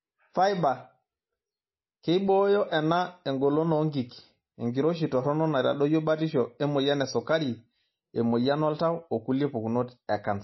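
Throughout, the speech has nothing above 5.8 kHz and sounds watery, with plainly audible swirling. This is likely MP3 compression at a low bitrate, around 24 kbps.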